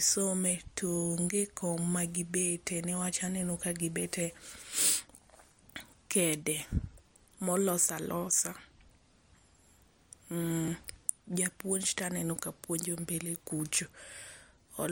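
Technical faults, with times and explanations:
10.68 s and 11.99 s (just before "aneno ka puonjo"), repeated buffer: a roughly 10.7 ms block, which fits a 512-sample buffer, plays twice because fresh audio arrived late, giving a brief click-like stutter. The waveform shows an identical segment copied with a hard seam, and the spectrogram shows a thin vertical line.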